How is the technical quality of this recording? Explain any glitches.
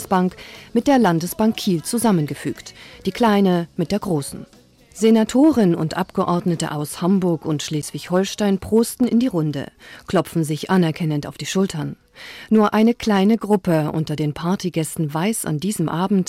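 Two faults stand out, one running through the whole recording and one brief dropout.

Hard clipping is there throughout. The level runs about 3 dB past what the chain can pass, so a small fraction of peaks get flattened into crackle on the peaks.

A block of digital silence hits at 7.82 s, an 11.6 ms gap, short enough to come across as a tick or dip rather than silence. It fits a 512-sample output buffer that didn't get filled in time.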